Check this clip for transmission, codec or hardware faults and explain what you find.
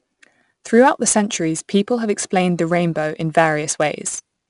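There's one codec fault running through the whole speech clip: 4-bit ADPCM compression. Each sample is coded as a coarse step from a prediction, so a gritty hiss rides on the louder passages, attacks crunch, and nothing sits above 10.6 kHz, which fits a stream around 89 kbps.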